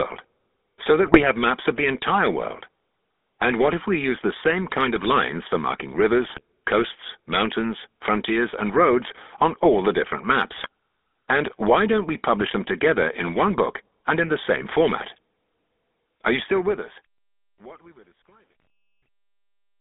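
Throughout, the speech sounds buzzy and gravelly, confined to roughly 250 Hz to 3.6 kHz. This is the GSM full-rate codec, which fits its 13 kbps rate: pulse-driven vocal-tract modelling discards fine detail.

From 1.06 to 1.21 s, just before "have maps of the", the voice breaks into squawks and gargling. The same happens from 6.26 to 6.41 s, between "lines for marking" and "coasts mountains frontiers and", and from 10.52 to 10.68 s, after "on all the different". A brief burst also comes at 18.60 to 18.67 s. These are GSM bit errors: corrupted filter, pitch and gain values distort or spike individual frames.

From 16.39 s to the end, the smooth fade-out turns gritty, worst from 17.46 s. This is truncation distortion on the fade, with only about 10 bits kept and no dither, so the quiet tail collapses into coarse steps.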